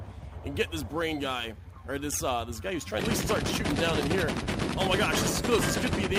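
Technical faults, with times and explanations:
2.99 to 3.01 s, skip ahead: the sound jumps abruptly forward with no silence at the join, as if about a second of audio simply vanished. That stretch was dropped in transit or discarded when an overflowing jitter buffer already held later audio, so playback resumes a second further on.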